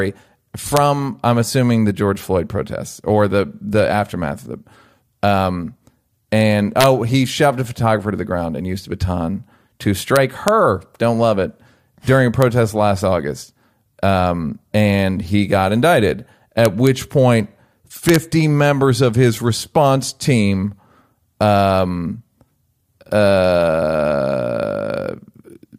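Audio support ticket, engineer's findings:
Integer overflow in the gain/summing stage: sample values exceeding full scale wrap to the opposite sign instead of saturating. Each over-range speech peak flips across the whole range, producing violent cracks far sharper than clipping. Events at 0.77 s, 6.81–6.86 s, 10.16–10.48 s, 12.42 s, 16.65–16.87 s and 18.09–18.16 s. Overdrive only about 0–1 dB, so peaks barely over the limit still crack. Missing saturation or clamp logic is the fix.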